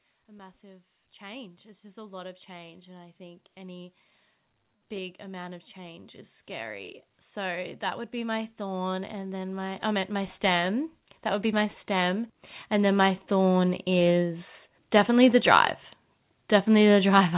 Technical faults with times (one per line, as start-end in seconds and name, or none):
0.26-3.96 automatic gain rising
4.89-13.89 automatic gain rising